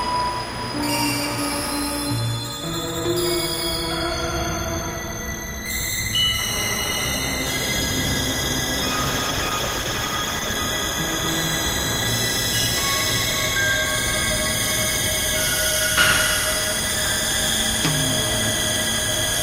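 A recording of everyday sounds carried over a call shows a call bitrate drop from 8.88 s to 10.61 s. For about 1.7 s the audio turns coarse and muffled, with a rough, watery texture and lost high-frequency detail. The encoder was pushed to spend far fewer bits after the call's bandwidth estimate fell. The degradation fits a fall from around 48 kbps to about 14 kbps, with quality recovering once the rate comes back up.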